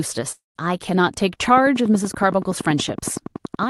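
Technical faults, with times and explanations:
0.31 to 0.58 s, long network dropout: the speech breaks off and the last sound is stretched into a buzzy continuation that fades over roughly a quarter of a second. About 150 ms of this is silence before the audio resumes. Around 240 ms of the speech never arrives and is simply skipped. This is likely a run of lost packets, with the receiver masking the gap by extending what it last had and then giving up.
1.48 s to the end at 3.69 s, train of clicks: a steady ticking sits over the speech and carries on through its pauses, at about 10.7 clicks per second with even spacing. The peaks reach a little above the level of the speech. The clicks all have much the same shape and arrive at a fixed pace, which points to a likely source in electrical interference from nearby equipment or a faulty connection or power supply.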